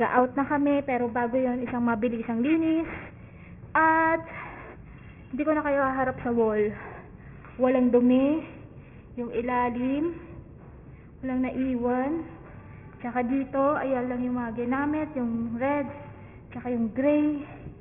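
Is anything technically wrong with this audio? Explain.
Yes. Aliasing runs through the whole clip. The audio sounds as if it was downsampled with no anti-alias filter, which fits a rate drop to about 6 kHz. Content above the 3 kHz fold point was not removed. It reflects back below 3 kHz at false, unrelated pitches. The folded energy sits roughly 20 dB under the main signal. Bright, sharp sounds come out gritty and metallic, and the spectrum stops hard at 3 kHz.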